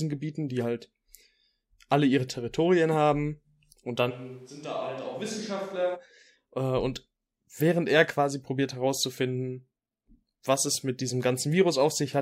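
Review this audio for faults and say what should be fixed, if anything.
From 4.12 to 5.94 s, after "haben und" until "äh und während er", the speech abruptly turns hollow and roomy, thinner in the bass, about 10 dB quieter, with room noise rising to roughly 30 dB below the speech. This is likely a switch to a distant microphone. A simple gain drop would keep the tone intact, and added reverb wouldn't thin the bass or bring up noise. Monitor and record the close microphone on its own track so a dropout can be caught and patched.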